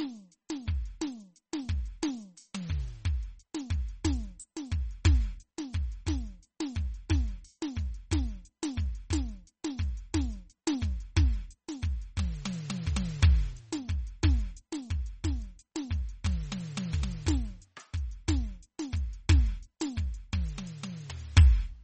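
The music sounds watery and swirly throughout, with nothing above 8.4 kHz, and the smeared, chirpy detail most likely comes from low-bitrate MP3 compression.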